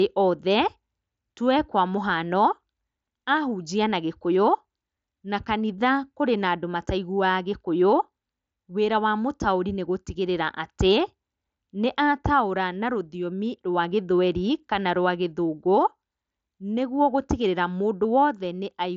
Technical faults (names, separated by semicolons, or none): none